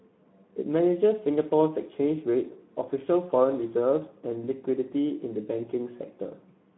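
Throughout, the speech carries plainly audible Speex codec damage: a hoarse, noisy texture from starved CELP excitation, limited to a 150 Hz to 3.4 kHz band, consistent with roughly 11 kbps.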